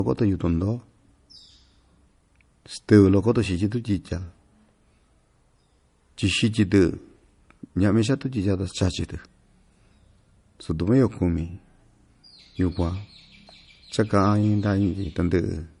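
From start to finish the speech has nothing above 10.5 kHz, so the top end sounds dull, with the smeary, swirly edges you get from heavy MP3 compression. That's likely low-bitrate audio saved at a high bitrate: the cut-off and artefacts point to an original encode somewhere around 40 kbit/s, later re-saved as a much bigger MP3. The second pass just preserves the damage; it can't bring back what the first one threw away.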